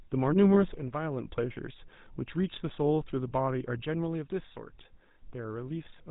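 A speech recording carried throughout by the GSM full-rate codec, whose damage is plainly audible. The codec rebuilds the voice from a vocal-tract model excited by a sparse, regularly spaced pulse train, so the speech has a buzzy, gravelly roughness and nothing above 4 kHz, consistent with the 13 kbps GSM full-rate coder. At 0.54 to 0.57 s there are lost GSM frames: the decoder repeats the last good frame's parameters, producing a brief rough, metallic ring. The span fits a single 20 ms frame concealed rather than a longer gap. From 3.85 s to the end the level falls abruptly by about 6 dB. The likely cause is one channel dropping out before the stereo pair was summed to mono, leaving only the remaining channel's half of the shared signal.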